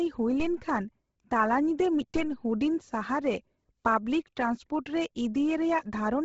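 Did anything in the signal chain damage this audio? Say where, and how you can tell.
Yes. Across the whole clip the speech has a grainy, breathy edge and the upper band is gone, with nothing above 7.7 kHz. That heavy damage points to the codec stage, and the cause is likely Bluetooth LC3 compression. At a low bitrate, around 16 kbps with 10 ms frames, the transform coder discards much of the upper spectrum and refills parts of it with noise. That produces the rough, hissy texture rather than clean detail.

There is also a DC step at 0.40 s and another at 2.16 s. Each is heard as a low thump while the speech carries on unchanged. The waveform's zero line jumps at each point and then drifts back, decaying as if through a high-pass of about 2 Hz. This belongs to the converter or analogue input stage. It is the signature of a converter recalibrating or of an input carrying an offset being switched into the path.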